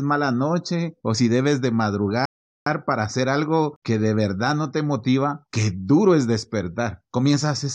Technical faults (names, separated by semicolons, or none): rebuffering stall